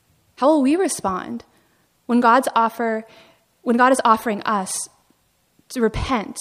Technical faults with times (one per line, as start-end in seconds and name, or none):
none